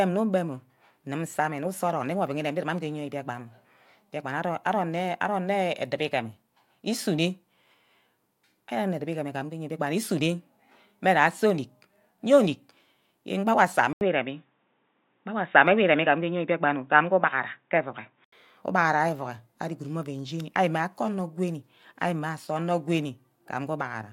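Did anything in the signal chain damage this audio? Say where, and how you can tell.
Yes. After "yen gba owa asa", 13.93 to 18.32 s goes silent for 80 ms, then loses everything above 3.8 kHz, shifts level and gains a faint new noise floor: likely input switched to a poorer device. A codec bandwidth drop wouldn't bring the gap or new noise.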